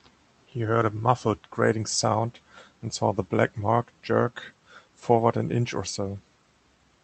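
No technical faults are present.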